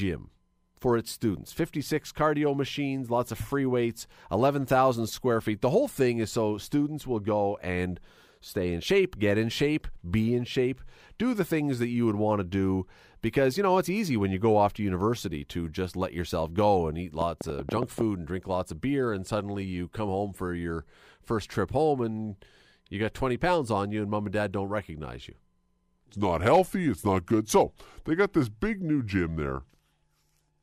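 A train of clicks runs from 17.21 to 18.02 s, just after "yourself go and eat" and before "and drink lots of". Roughly ten similar pulses arrive at an uneven pace, about 11.3 per second, popping well above the speech, likely from electrical interference or a faulty connection or power supply.

A section at the wrong speed begins at 26.04 s and lasts to the end. Playback runs at 0.842 times the original speed, likely from a mismatched clock, so the speech is slower and roughly three semitones deeper.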